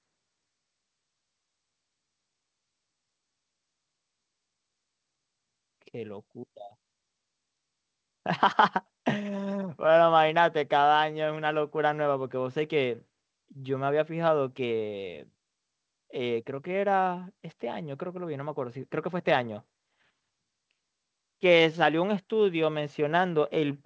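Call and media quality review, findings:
Nothing stood out on listening to the speech, which comes through a WebRTC call path on what sounds like G.722 at 64 kbps, with nothing heard above 8 kHz.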